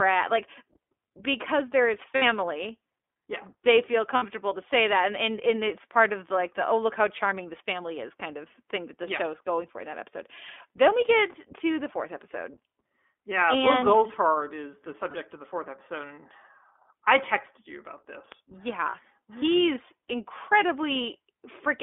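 Throughout, the speech passes through the iLBC codec. The band is held between 250 Hz and 3.5 kHz, and the sound has a plainly audible rough, synthetic edge, which fits the 15.2 kbps, 20 ms-frame mode. Unlike plain telephone band-limiting, the roughness comes from the coding, not just the missing treble.

Lost iLBC frames occur at 2.16 to 2.23 s, 4.16 to 4.25 s, 15.10 to 15.16 s and 18.90 to 18.96 s. Each gap lasts roughly 40 to 60 ms. The decoder fills it by repeating the last pitch cycle with added noise, so the gap sounds like a brief held, buzzy vowel rather than silence or a skip. Normal speech returns immediately afterwards, with none of the lingering smear that codecs relying on earlier frames leave after a loss.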